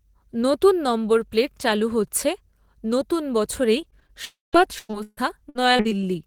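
Repeated packet loss (robotic sound) runs from 3.81 to 4.19 s, just after "নতুন বছরেই". Five short gaps of up to 19 ms are patched by stretching the preceding sound, leaving the speech choppy.

A long network dropout follows at 4.25 to 4.55 s. About 280 ms of audio is missing: a buzzy continuation fades into roughly 160 ms of silence, likely because the stream stopped arriving and the receiver could only extend the last sound.

Repeated packet loss (robotic sound) returns from 4.63 to 5.93 s. Nine gaps, the longest 141 ms, are filled with repeated sound covering about a third of the stretch, giving a choppy, broken texture.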